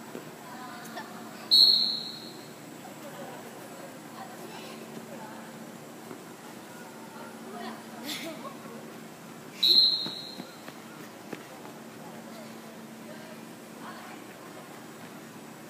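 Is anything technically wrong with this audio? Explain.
No, nothing technically wrong can be heard in this audio, and the signal holds steady throughout with no audible faults.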